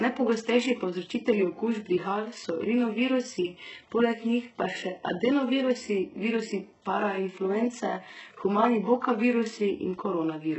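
Throughout, s sounds are gritty and metallic, with nothing above 8 kHz. The likely cause is heavy HE-AAC compression, which rebuilds the treble from copied lower bands.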